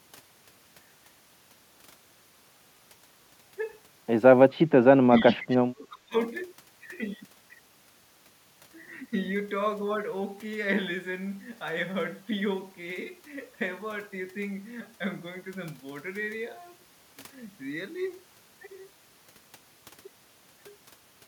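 At 4.55 s the speech dips briefly, about 20 dB down for roughly a tenth of a second. From 4.95 to 6.16 s it sinks further, about 30 dB. This is likely speech suppressed in double talk: with both ends talking, the echo canceller muted this talker along with the echo.

Between 5.18 and 5.57 s, a faint delayed copy of the speech surfaces, trailing by 395 ms and sitting about 25 dB below it. That is an echo leak, likely from a loudspeaker end whose canceller let part of its microphone pickup travel back.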